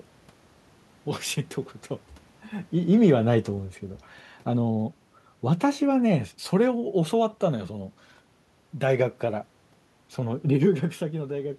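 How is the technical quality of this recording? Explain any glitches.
The recording has one technical glitch, an automatic gain falling.

From 2.95 to 4.94 s, the automatic gain control pulls its gain down by about 5 dB over roughly two seconds, so the speech and the room noise behind it sink together. On a waveform the envelope tapers steadily; on a spectrogram the whole band, noise floor included, dims evenly. The level changes near 2.5 s and 10.5 s sound like the talker moving, not the system.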